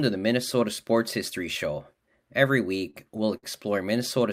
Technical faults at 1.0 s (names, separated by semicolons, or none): none